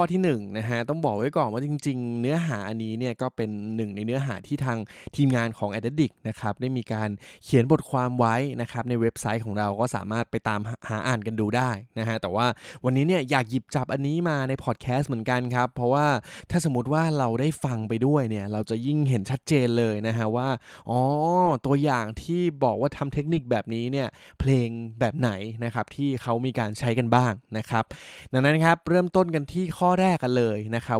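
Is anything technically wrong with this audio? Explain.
Yes. Four brief stretches of the speech turn rough and noisy, with no gap: at 9.99 to 10.01 s, 17.69 to 17.75 s, 21.45 to 21.51 s, and 23.15 to 23.37 s. This is a lost packet rebuilt from error correction. Each lost stretch was replaced by the decoder with a low-bitrate copy carried in the next packet. The durations (20 ms, then 40 ms twice, then 120 ms) fit one, two, two and six lost 20 ms packets.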